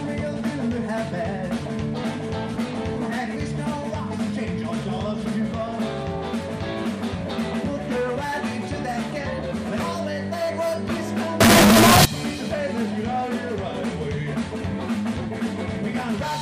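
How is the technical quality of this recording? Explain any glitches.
There is one serious glitch. From 11.41 to 12.05 s the sound turns into a loud, harsh, buzzing block. This is float read as integer. The likely cause is 32-bit float samples being read as 32-bit integers. Each sample's sign and exponent bits then set its value, so the waveform flattens into a near-square shape at an almost fixed, high level. Background noise becomes as loud as the wanted sound, yet the pitch can still be followed.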